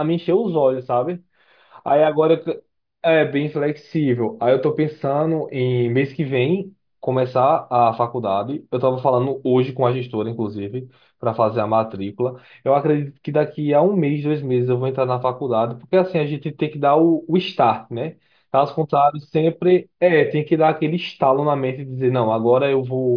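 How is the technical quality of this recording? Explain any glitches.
Nothing in the recording stands out as a glitch, so there's nothing to flag here.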